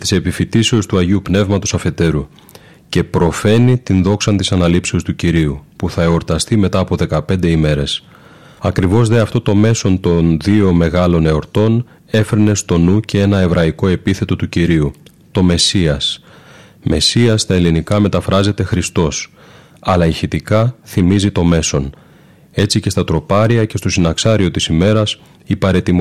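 Across the whole speech clip, the louder syllables carry a gritty crackle, a brief harshness that lands right on the peaks and then clears as the level drops. This is hard clipping. The signal was driven about 6 dB beyond what one stage could pass, so the tops of the waveform were sliced flat. Only a small share of the samples, around one or two percent, hit that ceiling. The flattened peaks create high harmonics, and those harmonics are what make the crackle.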